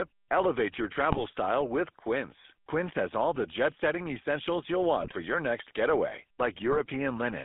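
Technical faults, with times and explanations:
throughout, GSM full-rate codec: a buzzy, gravelly roughness from pulse-driven vocal-tract modelling, consistent with 13 kbps full rate, heard within a 200 Hz to 3.6 kHz band. This is coarser than smoother modern codecs.
1.10–1.23 s, 5.00–5.13 s and 6.72–6.81 s, GSM bit errors: brief squawks, pops and gargling as corrupted filter, pitch or gain values distort frames. These are distorted bursts, not silent dropouts.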